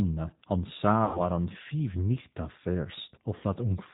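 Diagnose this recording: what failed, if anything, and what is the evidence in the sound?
The whole clip has been through the G.729 codec, and the damage is plainly audible. This is a codec-stage problem. Nothing above 4 kHz survives, so the speech sounds boxed-in and narrowband, with a rough, slightly synthetic edge. That fits an 8 kbit/s G.729A stream, where each 10 ms frame is rebuilt from a vocal-tract filter, a pitch predictor and a handful of pulses. The fine detail of the original waveform is simply gone.

There are two dropouts from VoIP packet loss concealed by the speech codec, which puts the fault in the network stage. The first runs from about 1.05 to 1.21 s, just before "an fiv nichta". About 100 ms went missing, which points to roughly five lost packets. The second runs from about 3.36 to 3.44 s, with around 60 ms lost. In both spots the decoder keeps extending its last pitch and filter while turning the gain down, so the sound smears into a buzzy tone or a coloured noise that fades. 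It then stays weak for a moment after real packets arrive again.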